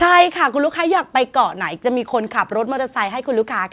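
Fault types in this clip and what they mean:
No faults can be heard in this speech recording.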